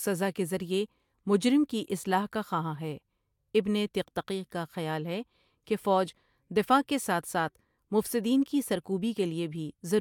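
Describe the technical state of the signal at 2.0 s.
At 2.0 s the signal is intact, with no audible fault at that moment.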